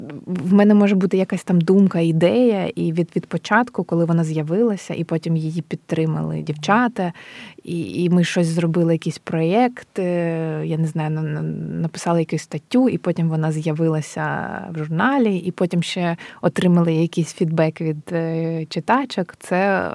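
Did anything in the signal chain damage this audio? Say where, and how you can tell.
No, no signal chain damage.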